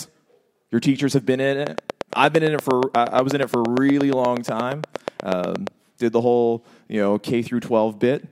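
From 1.67 s, just after "teachers have been in", to 5.68 s, before "did the whole you", a train of clicks ticks over the speech at a steady 8.5 per second, some forty in all, and loud, peaking around 15 dB above the speech. Each pulse has the same shape and they keep time through the pauses, which sets them apart from random crackle or from dropouts that follow the signal. The likely cause is interference or a faulty connection or power supply.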